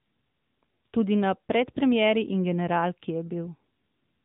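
Throughout, the speech has been carried by the AMR narrowband mobile codec, with damage that fits its 10.2 kbps mode. Each 20 ms frame is rebuilt from a vocal-tract model driven by sparse pulses, so nothing above 3.8 kHz remains and the voice sounds muffled, buzzy and plainly synthetic.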